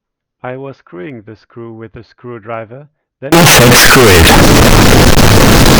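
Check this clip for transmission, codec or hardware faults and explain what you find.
There is one fault: from 3.32 s to the end, the audio shows a float read as integer error. The likely cause is that 32-bit float samples were interpreted as 32-bit integers, so each sample's sign and exponent bits, not its actual level, decide the output value. The waveform collapses into a near-square shape at an almost fixed, high level. The result is very loud and harsh, with background noise pushed up to the same level as the speech, though its pitch contour stays traceable.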